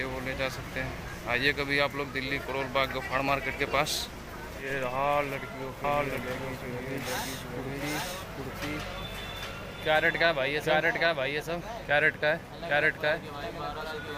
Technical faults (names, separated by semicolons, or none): doubled audio track